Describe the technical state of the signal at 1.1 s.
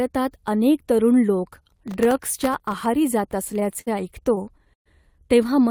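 The signal is intact at 1.1 s, with no audible fault at that point in the speech.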